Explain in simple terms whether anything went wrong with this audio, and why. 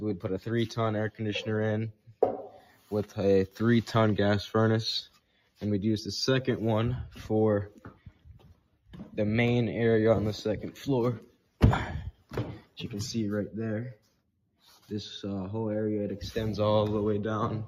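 A noise suppressor built for speech was left switched on for material that isn't speech. Throughout the clip, it keeps mistaking steady tones, room ambience and reverb for background noise and turning them down. Sharp attacks mostly slip through, but anything held or fading gets pulled down a little, so the level keeps rising and falling slightly. The result is a gentle pumping, fluttering quality and a thinner sound than it should have.

At several moments, the sound is cut by the noise suppressor much more heavily than elsewhere. This happens from 1.92 to 2.17 s, 2.53 to 2.91 s, 5.09 to 5.61 s, 7.76 to 8.94 s, 11.26 to 11.6 s, 12.12 to 12.32 s, 12.6 to 12.77 s and 13.95 to 14.2 s. In each spot, the sound briefly drops away or its tail is chopped short. The longest stretch, at around 8 s, lasts about a second.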